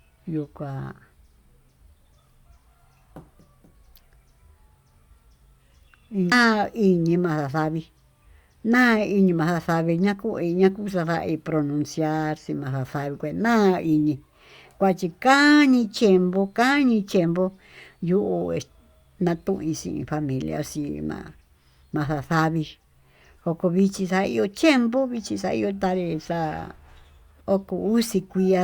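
Nothing to flag here: the speech runs along without a single technical fault turning up anywhere.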